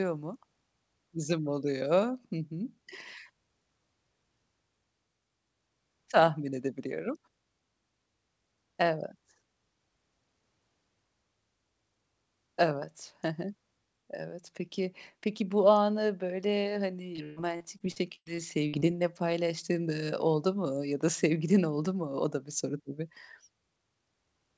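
From 17.16 to 18.83 s the speech breaks up with repeated packet loss, giving a robotic sound. Short holes, the longest about 126 ms, are patched by extending the previous sound, so roughly a quarter of the stretch is synthetic fill heard as choppy sound with pieces missing over the G.722 call path's 8 kHz bandwidth.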